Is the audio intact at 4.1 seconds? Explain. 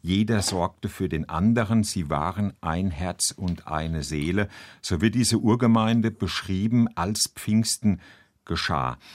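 Yes, the speech at 4.1 seconds is intact, with no audible fault at that moment.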